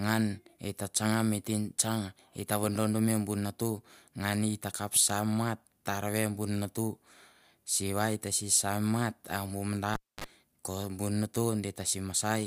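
Cable pulled and plugged in, 9.94–10.24 s: a pop, 257 ms near-silence, 39 ms of 50 Hz mains buzz while the tip reconnects, another pop.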